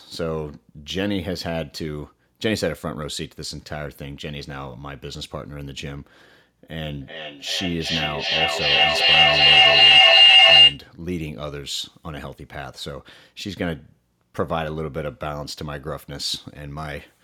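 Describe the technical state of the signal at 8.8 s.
At 8.8 s the signal is in the middle of a feedback howl that runs from 6.89 to 10.86 s. Sound from a loudspeaker is re-entering a microphone with gain on each pass, so the repeats, roughly 400 ms apart, grow into a tone near 3 kHz, peaking about 15 dB above the speech. On a spectrogram this shows as a bright horizontal line near 3 kHz. The waveform swells into a dense envelope.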